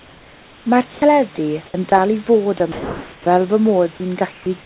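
Comfort noise in place of the background occurs at 0.00–0.66 s, 1.66–1.74 s and 4.32–4.46 s in this speech recording. In each pause the real room background gives way to a flat, featureless hiss about 3, 5 and 4 dB quieter respectively. The likely cause is discontinuous transmission: the sender stopped sending during silence, and the receiver synthesised smooth noise shaped only roughly like the original background.

Sound dropped by the voice detector occurs at 0.92–1.02 s, 1.90–1.92 s, 2.58–2.60 s and 2.72–3.26 s. In these gaps, parts of the speech itself vanish into the same steady noise: about 80 ms at the first, a brief 10 to 20 ms nick at the next two, and about 250 ms in the longest stretch. The detector likely mistook speech for background and cut transmission until it triggered again. All of this sits within a narrowband call path with nothing above 4 kHz, which fits G.711 telephone coding.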